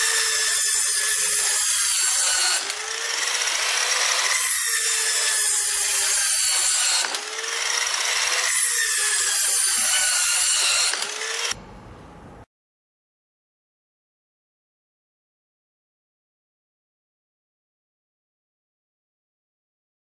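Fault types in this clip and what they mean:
Resampler restarted on every block: the 48 kHz to 24 kHz conversion was done on each 20 ms block separately, so the filter lost its neighbouring samples at every edge. The result is a steady 50 Hz buzz riding on the sound that drops away whenever the signal does.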